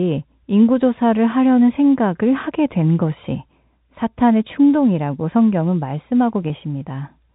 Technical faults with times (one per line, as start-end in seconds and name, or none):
6.48-6.50 packet loss with pitch repetition